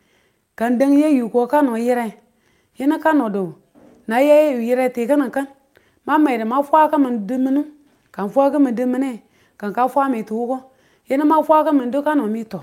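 Nothing in this bit of speech trips up the ear, with no faults turning up at any point along the way.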